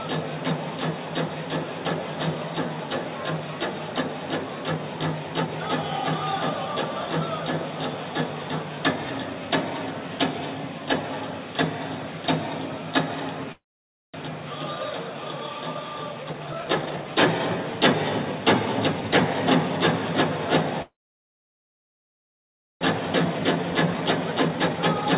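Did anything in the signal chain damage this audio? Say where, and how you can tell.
Yes, and it's the call stage: network delivery and the receiver's jitter buffer. Everything is band-limited with nothing above 4 kHz, which fits a narrowband call codec on that path.

There are two call audio freezes. At 13.52 s the sound stops for about 0.64 s, and roughly 0.54 s of that is silence. At 20.82 s it stops again for about 2 s, until 22.83 s, with about 1.9 s silent. Each time the audio picks up exactly where it left off, so nothing is lost and everything after is just shifted later. That points to packets stalling in transit and the jitter buffer likely running dry.

Then the jitter buffer speed-ups kick in as it sheds the extra delay. From 16.23 to 17.79 s the audio runs at 134% speed, trimming roughly half a second. From 18.23 to 19.08 s it runs at 108%, which is a gentler nudge. From 22.92 to 25.07 s, right after the long freeze, it runs at 122% and trims roughly another half second. 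The pitch stays put but the pacing sounds rushed, because short pitch-period chunks are being cut out over and over.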